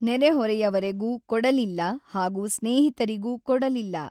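No technical faults can be heard in this speech clip. The Opus voice compression at 24 kbps runs in its hybrid mode across the full band, so the sound keeps its content above 8 kHz and carries only light coding damage.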